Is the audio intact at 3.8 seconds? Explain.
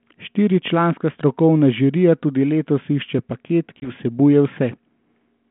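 No. At 3.80 s one packet of the G.726 ADPCM call, about 20 ms, was lost, so the decoder's adaptive predictor and step size fell out of step with the sender's. The sound drops to a hard-edged gap, then returns slightly distorted until about 3.91 s.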